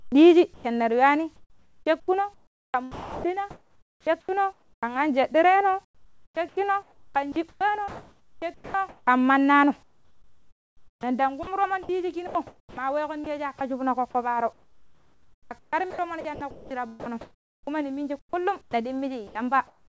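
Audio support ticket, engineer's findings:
Comfort noise in place of the background, 0.00–0.64 s and 19.27–19.93 s. Likely discontinuous transmission on the sender during pauses, with the receiver synthesising noise. Real background swapped for a flat, featureless hiss at clip start and end.

Sound dropped by the voice detector, 0.54–0.64 s and 19.27–19.35 s. Likely the sender's detector misread speech as background and stopped sending. About 90 ms and 80 ms of speech lost, replaced by steady noise until transmission resumes.

Sound chopped by the voice detector, 1.36–9.07 s, 9.83–13.29 s, 14.53–17.67 s and 18.19–18.73 s. Likely sender detector toggling on/off repeatedly. Syllable edges and quiet stretches repeatedly replaced by comfort noise, about 4.3 s, 1.7 s, 2.0 s and 0.26 s per stretch. Choppy delivery. Band limit at 8 kHz consistent with a G.722 call path.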